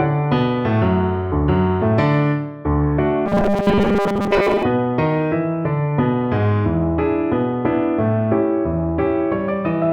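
From 3.26 to 4.63 s the sound turns into a rigid, metallic buzz at 200 Hz. This is robotic sound from repeated short buffers, likely caused by audio arriving too seldom. A 5 ms stretch is replayed over about 70 percent of this span while the real audio is skipped.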